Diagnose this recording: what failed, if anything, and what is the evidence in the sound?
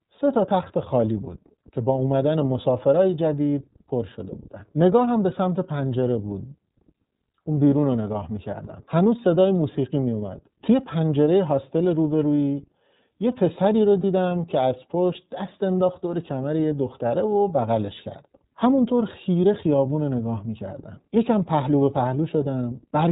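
The codec stage is where this goes wrong first. For all of the roughly 23 seconds, the speech has the narrowband iLBC codec sound: nothing above 4 kHz, and a slightly rough, synthetic edge to the voice, plainly audible rather than subtle. iLBC codes each frame's excitation on its own, without borrowing from the previous frame. This is the 13.33 kbps mode with 30 ms frames.

Then there's a network-stage dropout: a lost iLBC frame at about 14.01 to 14.04 s. That short stretch doesn't go silent. It turns into a brief held, faintly buzzy vowel-like sound, which is the decoder repeating the last pitch cycle blended with noise to cover the missing packet. The gap fits a single 30 ms frame, and since iLBC frames don't depend on each other, the speech snaps back cleanly right after it.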